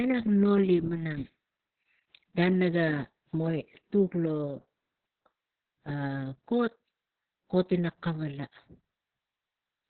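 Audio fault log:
throughout, Opus voice compression: Everything above about 4.4 kHz is gone, so the speech sounds boxed in and muffled, like an old phone line. The band has been squeezed to narrowband, and the SILK coder is describing the excitation very coarsely, which gives the voice that hoarse, slightly robotic grain. The damage is heavy, and it sounds like a very low bitrate, somewhere around 6 kbps.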